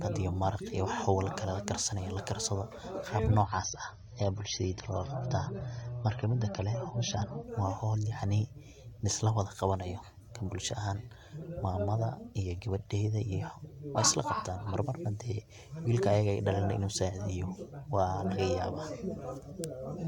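From 3.44 s to 7.44 s the speech abruptly turns dull and swirly, with nothing above about 6.3 kHz, then snaps back to full brightness with no gap at either edge. This is an adaptive stream at a lower bitrate: the player briefly switched to a cheaper rendition of the same AAC stream, and the narrowed bandwidth and added coding artefacts point to a drop from around 96 kbit/s to about 24 kbit/s.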